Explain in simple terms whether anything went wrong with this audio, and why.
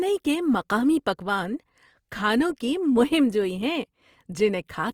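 Throughout the clip, the speech sounds grainy and rough, with a clearly audible noisy hiss clinging to the voice, though it stays bright rather than muffled. This is likely Opus compression: squeezed too tightly, the encoder fills in missing detail with noise instead of keeping it.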